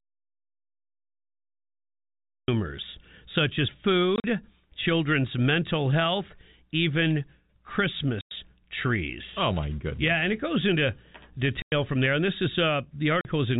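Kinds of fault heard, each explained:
Audio dropout to silence: the input signal was likely lost, through a broken connection or a stray mute, while recording carried on writing silence. The clip therefore opens in silence, with no room tone, until sound begins at 2.48 s.
Packet loss filled with silence: parts of the stream never arrived, and the receiver played silence in their place. This leaves hard-edged holes of up to 100 ms, after "such as" at 4.16 s, at 8.21 s, before "from there" at 11.62 s, and at 13.21 s.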